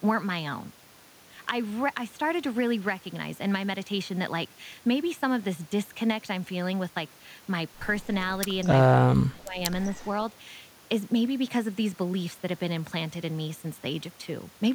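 A speech recording in which a loudspeaker-side echo canceller likely failed to remove all of what its microphone picked up, producing an echo leak: from 8.62 to 8.68 s a faint copy of the voice returns about 0.2 s late, roughly 25 dB below the speech. Shortly after, the same canceller likely mistook simultaneous talk for echo, and speech is suppressed in double talk. From 8.91 to 9.6 s the voice is turned down by up to about 25 dB for roughly 0.7 s.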